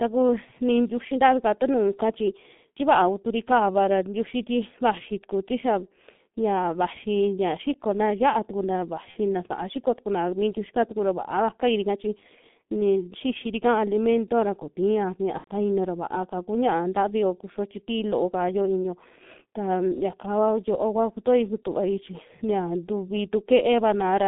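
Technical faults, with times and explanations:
Throughout: G.723.1 codec. The line is squeezed to roughly 150 Hz to 3.6 kHz and heavily coded, which points to a bitrate around 6.3 kbit/s. The slow-updating voice model smears consonants and leaves speech muffled and hoarse, with nothing up top.
9.11–9.18 s and 15.38–15.51 s: VoIP packet loss concealed by the speech codec. Right after "ya xikona ya'a tukana" a gap fitting one 30 ms frame, and later one fitting about 90 ms, get bridged by the decoder repeating its last pitch and filter at fading gain, so you hear a brief buzzy or noisy, stretched smear that's still weak as speech resumes.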